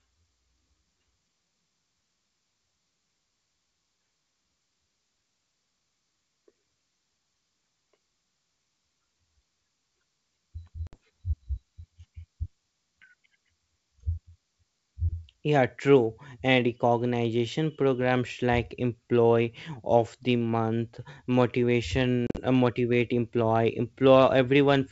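Speech carried over G.722 wideband coding at 64 kbit/s is broken twice by packet loss on an ADPCM call. About 60 ms of audio is lost, roughly several packets, at 10.87–10.97 s. At 22.27–22.42 s, 80 ms goes missing in scattered pieces, the longest run 40 ms, just before "uh motivate employee". What separates this from a plain dropout is the recovery: each hard-edged silent hole is followed by a click, wrong level or brief distortion, because the decoder's predictor and step size have lost track of the sender's and take tens of milliseconds to resynchronise.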